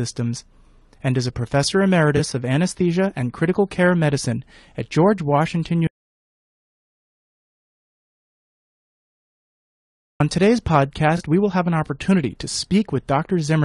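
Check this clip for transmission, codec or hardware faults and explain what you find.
Three kinds of fault are present in this speech: codec degradation across the whole clip, two brief concealed frame losses, and a long dropout to silence.

Low-delay AAC compression: Throughout, the speech has a rough, grainy texture with noise filling the gaps between harmonics and a dulled, somewhat synthetic top band. This is likely low-delay AAC such as AAC-ELD, whose short frames resolve pitch structure poorly, and at a low bitrate each frame gets too few bits. The plainly audible damage fits a low rate of around 32 kbps.

AAC frame loss with concealment: At 2.17 s and again at 11.17 s, a 20 ms stretch sounds briefly smeared and noisy against the surrounding speech. Each span fits a single lost AAC frame. Because the gaps are short, the decoder rebuilt each one from the last good spectrum, with altered phase or interpolated energy. 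That replacement is heard as a small blurred patch rather than a gap.

Audio dropout to silence: From 5.87 s to 10.20 s, about 4.3 s, the speech cuts out mid-flow and is replaced by silence, with no room tone or noise floor. It then resumes abruptly. The dead silence points to a likely loss of input upstream of the recorder or encoder, such as a disconnected device, a failed link or an unintended mute. Whatever was spoken in that interval is unrecoverable.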